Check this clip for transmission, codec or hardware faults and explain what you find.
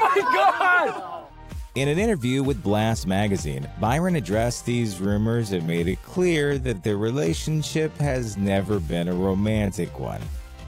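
One fault turns up: a time-stretched section running from 4.34 s to the end of the clip. At that point the pace drops abruptly to about 0.63 times its earlier speed while the pitch stays where it was, and the slowed audio drags. The likely cause is software lengthening that stretch to fill a set duration, holding pitch steady by repeating short slices of the signal.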